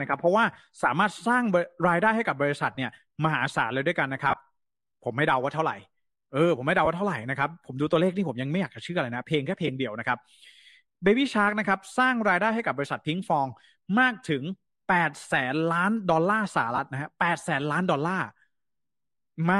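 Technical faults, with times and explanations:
2.75–2.78 s, 4.29–4.37 s, 6.85–6.87 s, 9.67–9.69 s and 16.76–16.79 s, lost LE Audio frames. Apart from the one at 4.29 s, each gap lasts 15 to 22.5 ms. At 4.29 s, 45 ms is lost in pieces over 75 ms, with the longest run around 20 ms. The LC3 decoder fills each gap by reusing the last spectrum with random signs. So the pitched speech briefly turns into a noisy smear. The gap lengths fit 7.5 ms frames.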